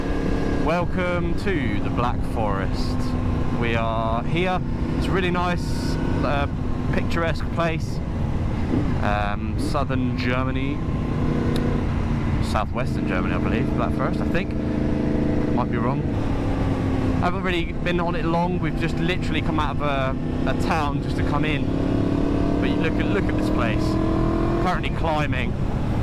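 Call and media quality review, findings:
No defects found: signal level, continuity and timing hold steady across the whole capture, with nothing for the pipeline to address.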